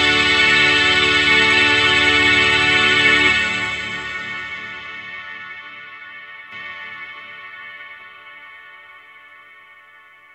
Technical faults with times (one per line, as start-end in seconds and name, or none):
6.52-10.35 doubled audio track